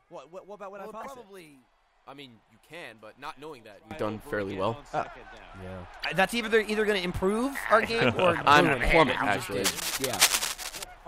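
One channel inverted is the likely cause of the faint opening from 0 to 3.91 s: one stereo side appears polarity-flipped, so the shared centre content cancels when the channels are summed, leaving a faint difference signal about 19 dB down. Corrupt frame decoded errors give short glitches at 1.00–1.06 s, 6.00–6.05 s and 8.71 s, where damaged compressed frames were played anyway and energy landed at wrong frequencies; the burst near 6 s is loudest, the one at 8.71 s faintest. Cable scratch noise from 9.64 to 10.84 s sounds like dense, uneven rustling close to the level of the audio, likely from a worn cable or connector being moved and its contact resistance fluctuating.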